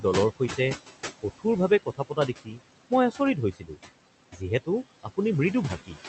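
Speech clip with noise suppressor artifacts throughout: the room noise, sitting about 13 dB below the voice, is pulled down about 16 dB between phrases and rises again under speech. Speech cut by the noise suppressor occurs at 1.86–2.28 s, 2.44–2.60 s, 3.53–3.77 s and 4.32–4.41 s, where quiet speech was misjudged as noise and dropped by up to about 17 dB, so those parts sound swallowed. The call path band-limits the audio at about 8 kHz, consistent with Opus at a moderate bitrate.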